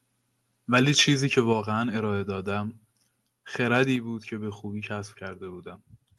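A speech recording in which the stretch from 0.76 to 1.03 s has the harsh, crackling edge of microphone overload, with peaks driven about 4 dB past the converter's limit and flattened on a small fraction of samples, likely from an input gain set too high. The microphone volume is then stepped down twice, at 1.53 s and again at 3.96 s, each time dropping voice and background together by about 4 dB, likely the call software reacting to the clipping by lowering the device's input level. The audio's top end stops near 12 kHz, consistent with an Opus call path at around 48 kbps.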